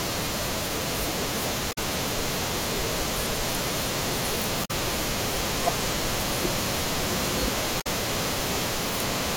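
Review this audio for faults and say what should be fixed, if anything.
Damaged data in a compressed stream: corrupted bytes made the decoder misread frames and lose sync, producing brief glitches from 1.71 to 1.78 s, 4.64 to 4.71 s and 7.80 to 7.87 s. Verify stream integrity with checksums and retransmit or re-fetch corrupted segments before decoding.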